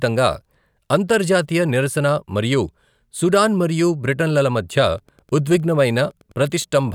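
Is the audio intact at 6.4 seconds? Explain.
No. At 6.4 seconds a faint, steady ticking sits well below the speech, repeating about ten times a second. This is Wi-Fi interference, running from 4.91 s to the end of the clip at 6.95 s. A nearby Wi-Fi radio sends a beacon every 102.4 ms, and the audio circuit picks up that RF burst and rectifies it into the signal path, turning each beacon into an audible tick.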